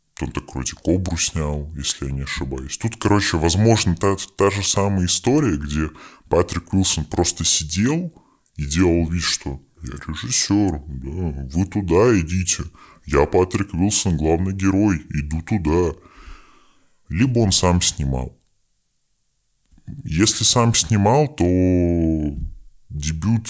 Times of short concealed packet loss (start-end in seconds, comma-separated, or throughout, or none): none